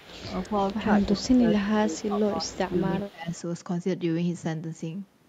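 A faint delayed copy of the speech trails it by 211 ms from 0.0 to 0.14 s, very quietly; this echo leak is likely loudspeaker pickup the far end's echo canceller missed. From 0.49 to 0.6 s the speech dips slightly, then an echo scrap returns at 0.73 to 0.77 s. From 0.83 to 3.32 s the speech sinks by as much as about 25 dB, roughly two seconds in total, with another brief echo at 3.0 to 3.04 s. This is speech suppressed in double talk, likely an echo canceller turning down the talker while both sides spoke.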